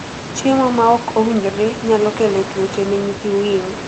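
Nothing is technically wrong with this speech clip.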